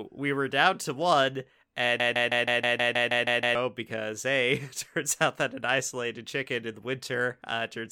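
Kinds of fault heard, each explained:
Broken-record loop: Right after "were down to one", a 0.16 s chunk of speech starts repeating back to back, ten times over, from about 2.00 s to 3.55 s, before the speech picks up again at "because hey". That's the classic stuck-buffer sound, most likely the player, encoder or stream stalling and replaying the last fragment it held, so whatever was said during those 1.5 seconds is simply gone.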